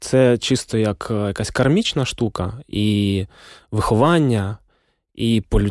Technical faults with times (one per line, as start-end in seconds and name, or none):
none